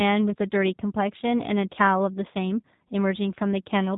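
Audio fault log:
Throughout, G.729 codec: the speech has the rough, slightly synthetic texture of a low-rate model-based coder. Each 10 ms frame is rebuilt from a vocal tract filter, a pitch predictor and a handful of pulses rather than the actual waveform, so the damage is plainly audible. Nothing is left above 3.8 kHz. The coarse, buzzy excitation fits roughly 8 kbit/s, which separates it from plain band-limiting, where the tone stays smooth.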